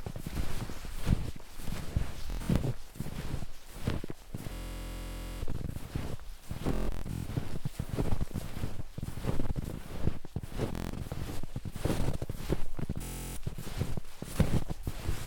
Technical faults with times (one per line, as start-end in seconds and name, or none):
2.30-2.60 Bluetooth stutter
4.53-5.43 Bluetooth stutter
6.69-7.26 Bluetooth stutter
10.75-10.93 Bluetooth stutter
13.03-13.37 Bluetooth stutter